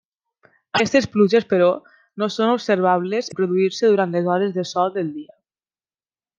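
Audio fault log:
0.75–0.80 s and 3.28–3.34 s, damaged data in a compressed stream: a short stretch of the encoded speech reached the decoder corrupted, so it misread those frames, lost sync and hunted for the next valid frame header before resuming. Each time this comes out as a brief squawk or blip of roughly 56 ms cutting into the speech, because the decoder briefly produced garbage and dropped sound instead of the real content.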